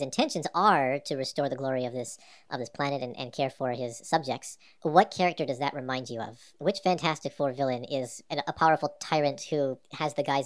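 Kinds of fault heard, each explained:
Wrong sample rate: the whole clip runs about 1.38 times too fast, with pitch raised about 5.5 semitones, so the speech sounds high and hurried throughout. Speed and pitch shift together, which fits 16 kHz material played back at 22 kHz without conversion.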